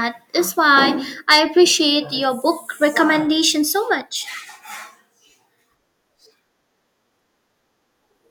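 At 1.31 s a stage in the signal path was driven about 4 dB beyond the level it could pass, so for the following 80 ms or so, to 1.39 s, the peaks of the speech waveform were sliced off flat. That is hard clipping. The squared-off tops add harmonics well up the spectrum, and with an overload this modest the result is a brief crackly roughness on the loudest moments of the speech rather than a continuous fuzz.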